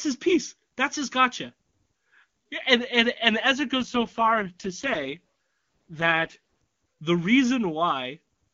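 At 3.78 s the speech turns rough and buzzy, with a synthetic, raspy edge, while the audio band stays the same and nothing drops out. This is an AMR rate drop. The AMR wideband (HD Voice) link steps down from a clear high rate to its lowest modes, which fits a fall to 6.6 kbit/s, so the vocal tract model has too few bits. Clarity returns at 6.37 s.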